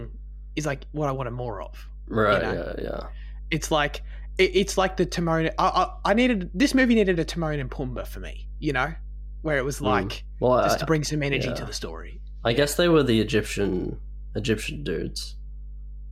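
Speech with steady mains hum at 50 Hz throughout, roughly 15 dB below the voice, from ground-loop coupling; a spectrogram shows a constant horizontal line at 50 Hz.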